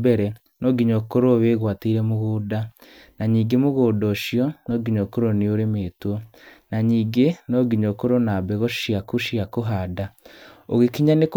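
Nothing stood out on listening to the speech in this recording.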